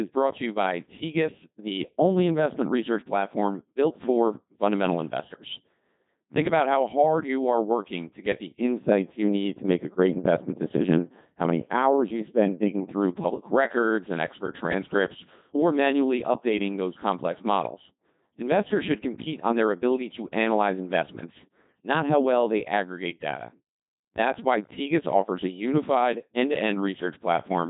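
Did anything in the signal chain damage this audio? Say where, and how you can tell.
Yes. The codec stage did the main damage. For the whole clip the speech comes through a Codec 2 vocoder. It sounds robotic and buzzy, and there is nothing above 3.8 kHz. The heavy artefacts fit a 2.4 kbit/s mode. Codec 2 sends only pitch, voicing, energy and a spectral outline, and the decoder rebuilds the voice from sine waves. A waveform codec at low bitrate smears and warbles, but here the buzz comes from synthesis itself.

A processing-stage fault sits on top of that. From 8.78 to 12.93 s, between "working to get the" and "public records and expert", the sound turns dull and muffled because de-emphasis was applied wrongly. A treble cut meant to undo pre-emphasis hit audio that had none, or was applied twice, tilting the response down smoothly by about 11 dB at 10 kHz relative to 1 kHz. A low-pass filter cuts off sharply at one frequency, but this is a gradual slope, and it starts and stops at exact times.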